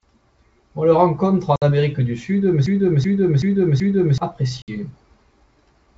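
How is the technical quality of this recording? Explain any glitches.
The recording has three clear glitches: two short dropouts and one stretch where the audio repeats itself. Underneath, the wideband telephone coding holds up, with speech audible up to about 7 kHz and only a faint upper-band hiss.

Packet loss on an ADPCM call occurs at 1.56–1.63 s and 4.62–4.72 s. Each time, about 60 ms of audio, likely a few packets, vanishes into silence. The decoder's adaptive predictor and step size then disagree with the sender's state, so the speech comes back slightly distorted before it settles. On a waveform each one shows as a flat, hard-edged gap. On a spectrogram it appears as an empty vertical slot.

A broken-record loop runs from 2.66 to 4.18 s. A fragment of about 0.38 s plays four times back to back, and the speech that belonged to that interval never appears. The likely cause is a stalled stream that kept resending the last fragment it held. 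On a spectrogram the same pattern stamps out identically at even 0.38 s intervals. On a waveform the envelope repeats exactly, like a tiled image.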